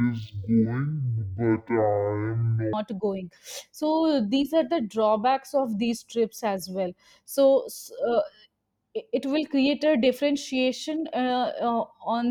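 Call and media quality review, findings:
Stereo read as mono, 0.0–2.73 s: speech at half speed, an octave low (−12 semitones). Probable component: decoder/file reader taking interleaved left-right samples as one channel, so each frame plays as two consecutive samples, halving rate and pitch.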